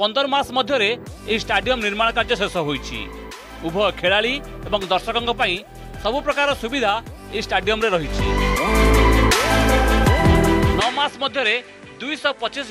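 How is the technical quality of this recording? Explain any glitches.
There's one real problem, and it's near the end. At 10.80 s the sound changes character and stays that way to the finish at 12.70 s. The top end disappears, with nothing above about 11.4 kHz. The level drops by roughly 5 dB, and a new, faint noise floor appears underneath. There's no gap at the transition. That pattern likely means the input switched to a poorer device mid-recording, which brings its own narrower band, different gain and background hiss. So the last couple of seconds sound duller and a bit quieter than everything before.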